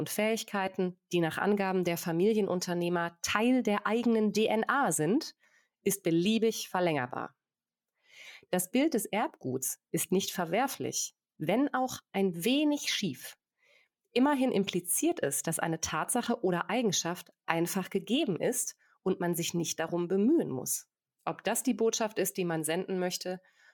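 No technical faults occur at any point in the recording.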